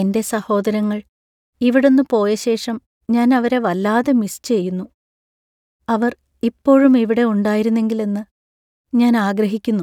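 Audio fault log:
No audible faults found.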